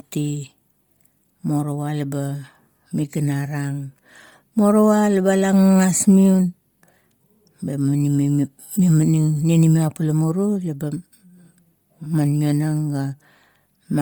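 Bluetooth LC3 compression runs through the whole clip. The speech carries a heavy breathy, grainy edge in the upper range, where detail has been swapped for a smeared hiss. This is likely LC3, the LE Audio transform codec: at a low rate it discards much of the high spectrum in each frame and fills the gaps with shaped noise. The degree of damage fits roughly 32 kbps with 10 ms frames, while content still reaches about 20.2 kHz.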